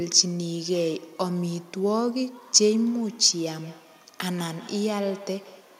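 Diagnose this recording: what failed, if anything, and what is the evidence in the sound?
From 3.46 s to the end at 5.79 s, the speech returns as thin, ringing repeats roughly a fifth of a second apart, about 20 dB below the voice. This is feedback echo between two devices: a second device's speaker re-feeds the microphone, beyond the echo canceller's reach.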